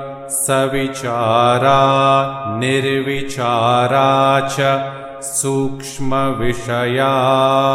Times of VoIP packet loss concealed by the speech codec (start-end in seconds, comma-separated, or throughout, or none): none